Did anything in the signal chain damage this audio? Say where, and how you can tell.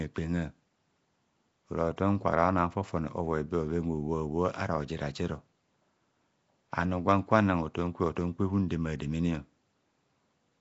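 Yes, the damage is at the codec stage, and it runs through the whole speech clip. There is clearly audible coding damage: a rough, hissy halo around the speech and a smeared, underwater quality, with nothing above about 7.7 kHz. This is likely Nellymoser compression, a fixed two bits per sample over 256-sample blocks, with empty bands filled by noise. It differs from a plain band-limited line because that noise fill makes the hiss follow the speech.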